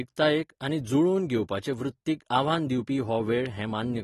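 Speech carrying plainly audible AAC compression throughout, likely from a low-bitrate AAC-LC encode near 37 kbps: nothing above 12.4 kHz, leaving sibilants dull and smeared.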